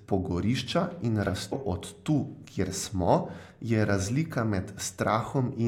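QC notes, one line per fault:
1.51 s, compressed frames skipped: right after "pogorišča in" the speech lurches forward, with a short smeared blip rather than a sharp click, and resumes at "od tu kjer smo" with about a fifth of a second gone. Whole compressed frames were never played, either missing from the file or rejected as damaged by the decoder. The jump fits roughly seven frames of 23.2 ms each. The overlap between neighbouring frames blurs the join, which is why it sounds soft rather than clicky.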